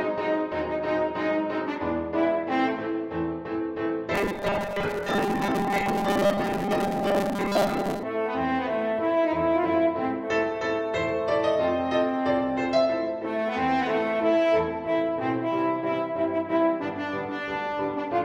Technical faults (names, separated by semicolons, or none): robotic sound from repeated short buffers